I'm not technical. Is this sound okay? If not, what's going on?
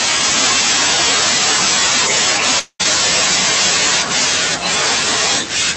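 No. From 2.59 to 2.81 s the speech breaks into a fading buzz, then brief silence. This is likely a long network dropout, with about 0.2 s lost.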